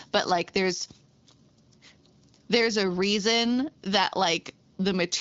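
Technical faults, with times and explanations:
No technical faults can be heard in this speech recording. It carries the character of the AMR wideband (HD Voice) codec at 12.65 kbit/s, with the speech clear up to 6.4 kHz and the band above it, to 7 kHz, filled with shaped noise.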